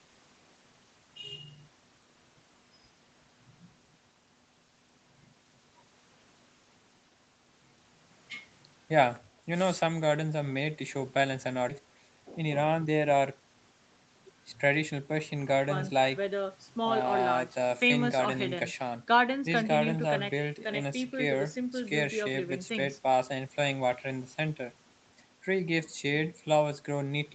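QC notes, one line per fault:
11.69 s, skip ahead: playback jumps straight past roughly 0.4 s of speech with no silence or fill at the join, so the sound cuts abruptly mid-flow. Unlike a dropout, nothing goes quiet. Audio is simply missing, likely discarded when the jitter buffer overflowed.
11.78–13.61 s, jitter buffer speed-up: speech runs at about 111% speed for this stretch as the receiver trims short pitch-period pieces, around a fifth of a second in total, to shed excess delay. It sounds hurried, but pitch stays unchanged, unlike a resampling speed error.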